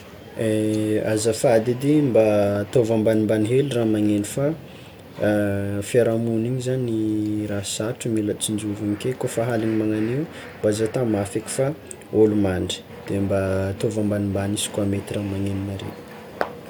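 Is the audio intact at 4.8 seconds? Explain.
Yes, the speech at 4.8 seconds comes through intact, with no audible fault at that moment.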